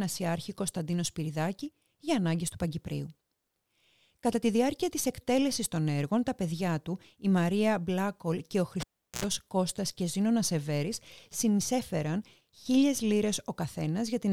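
This speech clip has a cable pulled and plugged in between 8.80 and 9.24 s. A pop opens a gap of about 389 ms of near silence. Then 60 Hz mains buzz lasts 80 ms while only the plug tip makes contact. A second pop marks the signal returning.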